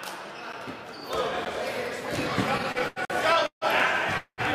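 A sharp tick at 0.53 s and another at 1.45 s are each a block of digital silence. About 9 and 12 ms of samples drop abruptly to zero, and the second gap fits a 512-sample buffer that was not filled in time. From 2.57 to 3.64 s the audio drags and stutters through seven brief holds, the longest lasting 152 ms. These are repeated stalls (stutter): late packets kept emptying the jitter buffer, and the continued sound filled 314 ms without losing anything. Inside that stretch, from 3.05 to 3.10 s, a 46 ms hole is another block of digital silence, consistent with a missed 2048-sample buffer. From 4.17 to 4.41 s the sound hangs as a fading buzz, then about 90 ms of silence, before resuming where it stopped. This is a call audio freeze, likely caused by packets held up in transit.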